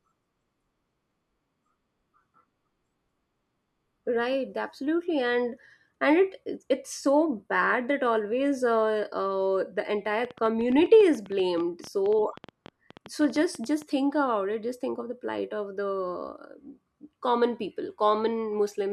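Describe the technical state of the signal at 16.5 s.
Around 16.5 s the signal is intact, with no audible fault at that point in the speech.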